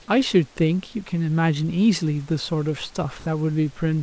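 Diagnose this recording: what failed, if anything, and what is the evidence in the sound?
Nothing has gone wrong here: the speech comes through the call path intact, with the top end stopping at 8 kHz as you'd expect from a wideband codec such as G.722, and there's a quiet bed of room noise about 33 dB under the speech that belongs to the space the microphone was in rather than to the system.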